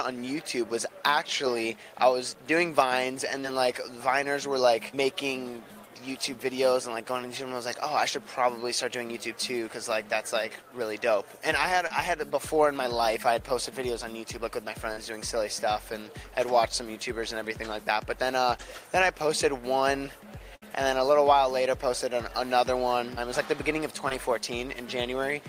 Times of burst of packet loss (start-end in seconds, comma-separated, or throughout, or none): 20.56-20.63